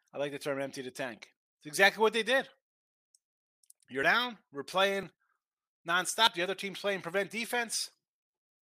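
At 5.03 s and again at 6.27 s the speech jumps forward abruptly, each time skipping roughly 30 ms of sound with no gap in between. The likely cause is a dropped buffer (overrun): the samples were not read out before the hardware overwrote them, so the lost stretch is simply missing and the audio on either side is spliced together. On a waveform each point shows a sudden discontinuity; a spectrogram shows a vertical seam where the patterns fail to line up.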